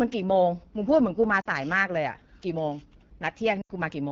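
A short speech clip carried over the AMR wideband (HD Voice) codec throughout. The codec damage is plainly audible. The voice sounds rough and raspy rather than clean. That texture fits one of the lowest AMR-WB rates, around 8.85 kbit/s. At such rates the pulse-driven vocal tract model has too few bits to track the voice closely. The top band above 6.4 kHz is filled with shaped noise, not real detail. Lost AMR speech frames cause two dropouts. From 1.41 to 1.47 s the sound drops toward near silence for 40 ms. That length points to two missing 20 ms frames. From 3.62 to 3.70 s the gap is longer, 80 ms. There the sound drops to near silence within two frames. The voice returns weak and rough for a moment. In each case radio errors corrupted frames. The decoder then repeated the last good pitch and vocal tract settings at falling gain.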